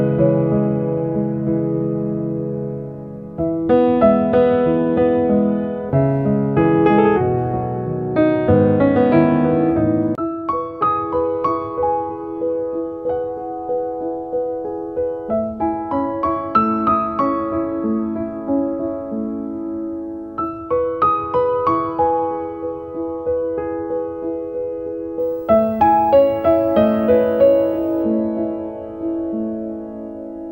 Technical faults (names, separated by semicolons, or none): video or display buzz